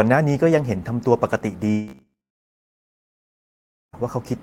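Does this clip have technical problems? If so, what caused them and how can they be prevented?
Yes. From 1.71 to 3.95 s there is a long network dropout. The sound trails off, then about 1.8 s of near silence follows. Roughly 2.2 s of speech never returns. A likely cause is lost network packets. A steadier connection with forward error correction would prevent it.

Between 1.88 and 2.80 s the speech turns into a rigid metallic buzz at 66.7 Hz. This is robotic sound from repeated short buffers. The pitch points to a 15 ms block being replayed. About half of this span is repeats, likely because audio arrived too seldom. A larger jitter buffer would prevent it.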